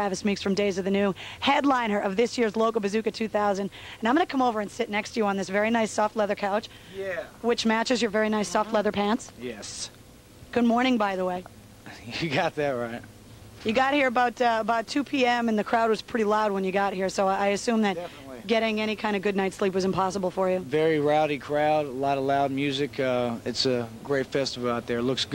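No technical faults can be heard anywhere here.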